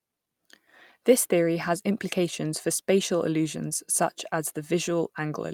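No technical faults can be heard anywhere in the speech.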